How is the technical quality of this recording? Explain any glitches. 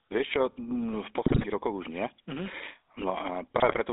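The technical quality is poor. The speech has passed through a GSM phone codec, and two short bursts of transmission damage break it up.

The GSM full-rate codec colours the whole clip. The sound is confined to a narrow phone band, roughly 300 Hz to 3.6 kHz, so it is thin and muffled. The codec rebuilds speech from a vocal-tract model excited by coarse, regularly spaced pulses, which fits 13 kbps full-rate GSM. That crude excitation gives a plainly audible buzzy, gravelly roughness.

GSM bit errors strike from 1.26 to 1.47 s and again from 3.58 to 3.8 s. Corrupted bits reached the decoder, spoiling the filter, pitch and gain values for a run of frames. Each burst lasts about a fifth of a second and points to roughly ten damaged frames. The first has the higher error rate. Both produce squawks, pops and gargling distortion.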